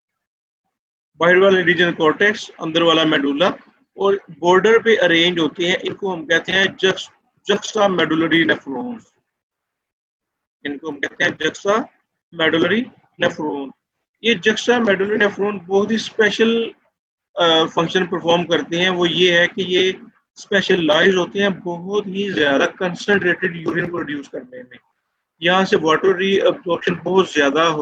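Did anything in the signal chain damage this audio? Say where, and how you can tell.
Yes, there's a short concealed packet loss on the network leg, around 26.79 to 26.83 s. About 20 ms never arrived, and the decoder bridged roughly 15 ms of it by extending the preceding sound before crossfading back, which leaves a brief smear right there.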